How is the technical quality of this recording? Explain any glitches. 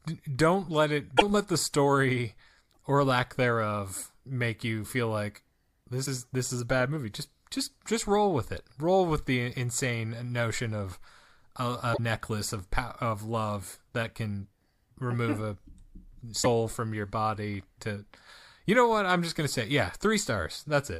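Five short glitches break up the speech, at 1.16 to 1.22, 2.73 to 2.77, 6.05 to 6.08, 11.93 to 11.99 and 16.42 to 16.46 seconds. Each is a quick skip-ahead with a garbled blip, likely a broken MP3 bit reservoir: dropped frames leave the next ones decoding borrowed bytes that no longer belong to them.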